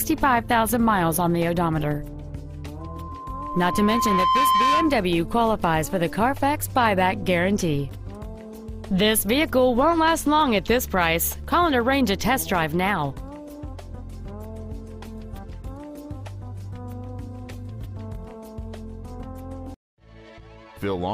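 At 2.80 s a loudspeaker feedback squeal begins. A single tone at 1 kHz rises out of the sound. It takes about a second and a half to reach full strength. At its peak it sits roughly 5 dB above the rest of the audio. The microphone is hearing the loudspeaker it feeds. At 1 kHz the loop gains more than it loses, so the tone keeps feeding itself. The squeal stops at 5.07 s, when the loop is broken.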